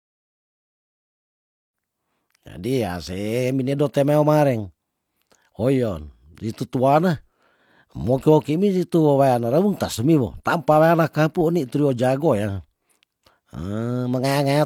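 Speech recording with no audible technical faults.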